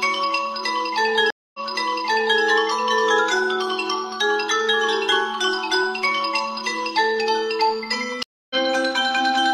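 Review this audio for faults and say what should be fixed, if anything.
Two stream reconnects break the audio. At 1.30 s the stream drops for about 0.24 s, then a fresh decoder resumes 0.88 s earlier, so material repeats until 2.42 s. At 8.23 s a 0.27 s silence is followed by a resume roughly a fifth of a second later, skipping material through 8.56 s. On a waveform each shows as a flat gap followed by a short muted or fading onset. A spectrogram shows a blank column and a discontinuity where the content jumps. Prevent this by buffering enough to ride out brief connection drops and resuming from the exact stream position.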